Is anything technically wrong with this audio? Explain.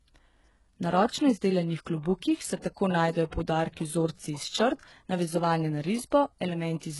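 Yes. The speech shows heavy codec damage from start to finish. Nothing is present above 11.5 kHz. The upper range sounds false. Sibilants come out gritty and metallic, with a lisp. The likely cause is HE-AAC compression at a very low bitrate, which fits roughly 12 kbps. That codec keeps only the lower spectrum. It fills in the treble by copying lower bands upward under a coarse envelope. The copied harmonics do not align with the real ones, hence the harsh, synthetic top end.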